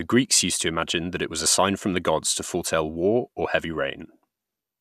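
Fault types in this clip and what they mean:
No fault types are present in this clip.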